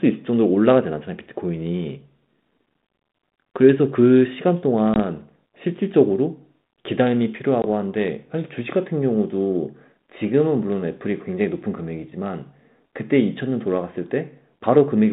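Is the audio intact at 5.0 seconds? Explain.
No: packet loss on an ADPCM call, at 4.94 to 5.00 s, dropped about one packet, leaving a hard-edged hole; the desynchronised decoder then returns sound slightly distorted before settling.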